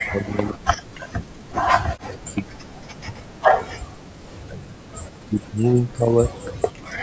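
Likely speech suppressed in double talk: with both sides talking at once, the echo canceller cuts the speech by as much as about 40 dB, from 0.03 to 1.32 s, 1.65 to 3.79 s, 4.39 to 4.84 s and 5.23 to 6.33 s, so it sinks and breaks up. At 4.07 s, background gated by the echo canceller clamps the microphone for about 40 ms, and the room sound briefly drops by about 29 dB.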